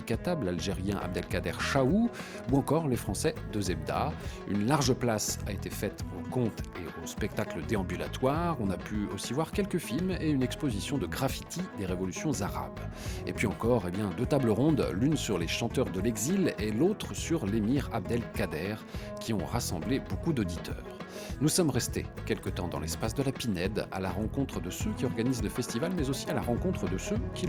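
Nothing is technically wrong with this audio, so there are no faults, times or causes to report.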